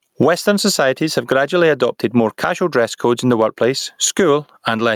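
Gain pumping runs through the whole speech clip: loud and soft parts are squashed closer together, with the level swinging by around 15 dB. The likely cause is input gain set far too high with a fast limiter clamping it down. The waveform looks flattened and uniformly dense.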